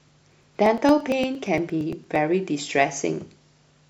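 From about 0.09 s to 2.16 s the speech carries periodic USB or driver dropouts: every 0.115 s something stalls the audio path and roughly 10 ms of sound is skipped outright. That gives around twenty evenly spaced ticks, only audible while the speech is sounding.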